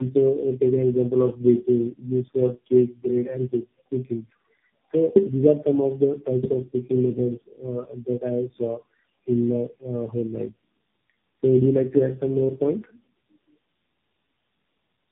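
From start to finish there is tandem speech coding: the call was decoded and re-encoded at each link border, which points to four speech coders in a row ending in AMR-NB. The speech sounds rough, muffled and warbly, with nothing above 3.7 kHz.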